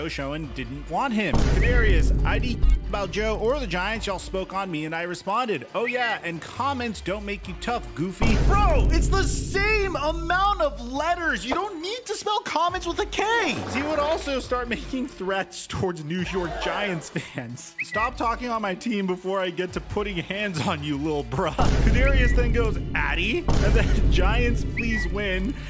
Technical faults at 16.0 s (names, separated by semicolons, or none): resampler restarted on every block